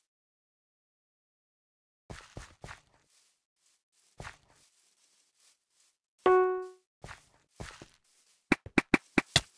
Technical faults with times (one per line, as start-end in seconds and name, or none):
none